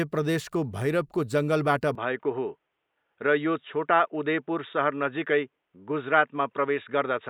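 At 1.95 s the speech turns dull and boxy, with nothing above 3.8 kHz, through to the end. This is likely an input switched to a poorer device.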